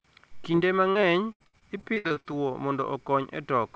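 At 0.52 to 0.55 s a brief smear passes through the speech. This is short concealed packet loss: about 20 ms of audio arrived too late to decode, so the receiver extended the preceding sound to cover the gap and then blended back into the real signal.

From 0.91 to 2.27 s the speech turns choppy and robotic, with pieces dropping out. This is repeated packet loss. More than a dozen separate holes, the longest about 75 ms, were each patched by continuing the last sound. About a third of this stretch is reconstructed rather than received, and nothing above 8 kHz comes through the call codec, which is consistent with G.722.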